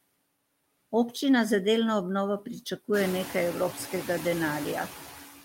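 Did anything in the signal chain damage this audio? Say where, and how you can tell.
Yes. Noise suppressor artifacts run through the whole clip, introduced at the call-processing stage. The background drops by about 20 dB in the gaps between words and then comes back up underneath them, so the noise floor pumps in step with the speech. The suppressor estimates which frequency bands hold steady noise and attenuates them frame by frame. When speech energy fills those bands, it lets them through again. The room noise that steps up by about 16 dB around 3 s is part of the recording itself.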